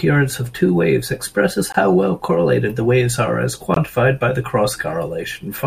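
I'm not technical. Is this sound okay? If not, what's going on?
No. This speech has a gap between chunks: two brief silences with hard edges, from 1.72 to 1.74 s and from 3.74 to 3.76 s. Each lasts 20 ms and arrives 2 s after the last. The audio was handled in 2-second pieces, and a small stretch of silence was inserted at each join. Nothing is missing, but the flow of the speech is chopped at those two points.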